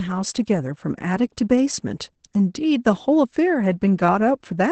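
Opus voice compression runs throughout. The speech is coded by the SILK linear-prediction coder in wideband mode, with nothing above 8.8 kHz, and its coarse excitation leaves a plainly muffled, hoarse, slightly robotic tone, which fits a low bitrate near 12 kbps.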